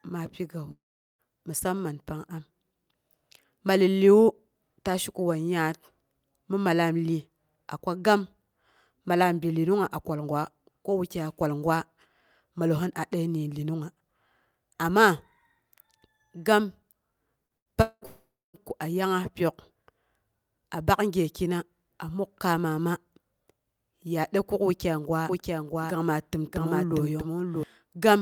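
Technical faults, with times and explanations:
0.71–1.22 s, long network dropout: about 0.48 s of sound is missing. A brief fading buzz covers the start of the hole, then roughly 0.4 s of silence follows, likely from audio that never arrived. It is one long gap, not a string of short choppy ones.
17.47–18.05 s, repeated packet loss (robotic sound): four separate holes, the longest about 0.2 s, are each patched by stretching the last sound. Patching covers about half of this stretch, which gives a choppy texture with pieces missing rather than a single clean break.
18.06–18.57 s, long network dropout: straight after the choppy stretch, another 0.48 s is lost, likely to a stall in delivery. A short fading fill is followed by about 0.25 s of silence, and the sound resumes further on with the missing part gone.
25.29–27.63 s, doubled audio track: a second full-band copy of the speech runs about 0.7 s behind, roughly 5 dB quieter, likely from a second, slower capture path. 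Unlike a room echo, it has no decay or colouring and starts and stops abruptly.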